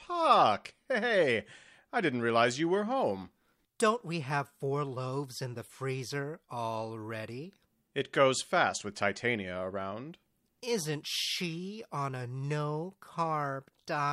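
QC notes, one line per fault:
No faults found in this speech recording. Nothing here calls for a timed entry.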